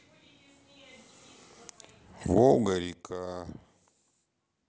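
From 2.53 to 2.94 s a fast ticking, zipping texture rides on the speech as the level drops by roughly 15 dB, a run of tiny clicks at around 30 per second. This is zipper noise: the gain change is applied in coarse 1 dB jumps with no smoothing between them, so each abrupt step puts a small discontinuity into the waveform, and the string of them is heard as the zip.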